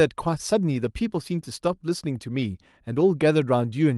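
No technical faults are audible.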